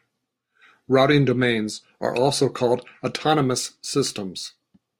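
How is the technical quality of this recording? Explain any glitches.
The recording has one fault. From 3.29 s to the end, just after "domains are also called", there is sample clock jitter: an unsteady converter clock, wandering by a couple of microseconds, mistimes samples, adding roughness around 30 dB below the signal. Unlike steady background hiss, it swells on loud, bright sounds and disappears in pauses.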